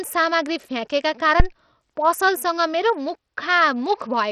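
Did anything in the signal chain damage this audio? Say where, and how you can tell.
Yes, in two places. Throughout, the top end stops dead around 14.7 kHz, with a gritty, coarse texture and flickering treble riding on the speech. That points to a likely Bluetooth SBC compression stage at a starved bit pool, consistent with roughly 64 kbps, dropping the upper sub-bands.

In the analogue wiring, there's a phantom power thump from 1.40 to 1.48 s, a deep low thud dying away in about 19 ms. Switching the supply on a live input sends a voltage step through the coupling capacitors, and that step is what you hear.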